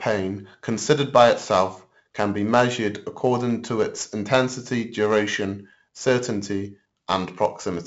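4-bit ADPCM compression runs throughout. Each sample is coded as a coarse 4-bit step from a prediction, leaving heavy gritty hiss on every loud syllable and distorted sharp onsets. Nothing is heard above 7.7 kHz, which fits a 64 kbps stream sampled at 16 kHz.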